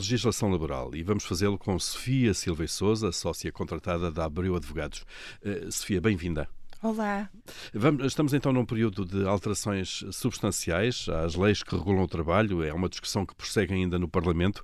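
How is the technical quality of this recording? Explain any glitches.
Nothing stood out on listening to this speech recording, and there are no glitches to explain.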